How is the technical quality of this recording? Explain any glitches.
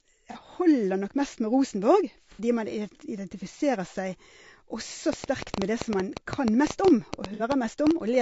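The recording is plainly degraded: a compressed, grainy character runs through the whole clip, three brief dropouts are patched over, and a burst of clicking appears near the end.

Low-delay AAC compression, throughout: The speech sounds rough and grainy, with noise between the harmonics and a thin, synthetic-sounding top band. This is likely AAC-ELD, the low-delay codec used for video calls, at a low bitrate around 32 kbps. Its short frames resolve voice harmonics poorly and use bits inefficiently, and at this rate the damage is plainly audible.

AAC frame loss with concealment, at 0.32–0.37 s, 2.34–2.41 s and 7.34–7.42 s: The first gap lasts 30 ms, which fits a single lost frame. The other two last 60 ms, which fits two lost frames each. In each gap the decoder fills the missing audio from the last good spectrum. The result is a short smeared, noisy or phasey patch rather than silence.

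Train of clicks, 5.13–7.92 s: About 20 similar clicks arrive at roughly 7 per second, unevenly spaced and peaking around 15 dB above the speech. They tick over the sound and through pauses alike. The likely cause is interference from nearby equipment or a faulty connection injecting repeated pulses. The third concealed dropout falls inside this stretch.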